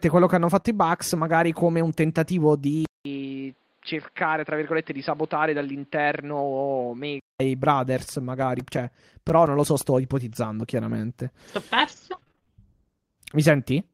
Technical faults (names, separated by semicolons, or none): short concealed packet loss; input switched to a poorer device; CD scratch ticks; lost packet rebuilt from error correction; repeated packet loss (robotic sound)